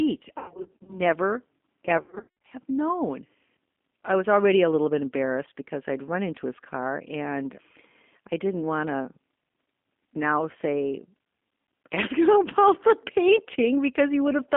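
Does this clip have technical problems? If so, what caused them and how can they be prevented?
Yes. The whole clip has that rough, slightly synthetic G.729 codec character: thin, band-limited to about 200 Hz to 3.5 kHz, which fits an 8 kbit/s model-based voice codec. To avoid it, use a wideband codec like Opus at a healthy bitrate.

There's also VoIP packet loss concealed by the speech codec, from 0.38 to 1.00 s and from 1.98 to 2.44 s, just before "have known". About a third of a second of audio went missing in each, in gaps of up to 100 ms, and the decoder smeared its last frame into buzzy, fading filler. To prevent it, fix the network path or add jitter buffering and forward error correction.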